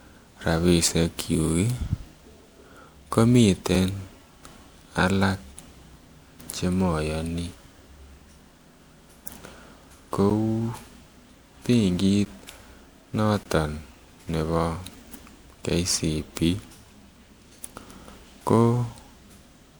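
From the start, the speech carries generation loss, likely from being encoded to MP3 at 128 kbit/s about four times over. Each pass requantised on a shifted frame grid, so the sound is swirlier, more hollow and more smeared at consonant onsets than a single 128 kbit/s encode would be.

Blocks of digital silence then interrupt it at 3.75 s (about 4.4 ms), 10.30 s and 12.25 s (about 10.7 ms each, which fits a 512-sample buffer), and from 13.43 to 13.46 s (about 21 ms, fitting 1024 samples). Each is likely an unfilled output buffer cutting straight to silence with no fade. The shortest is a tick and the longest a brief hole. Unlike packet-loss concealment, nothing is repeated or faded across the gap.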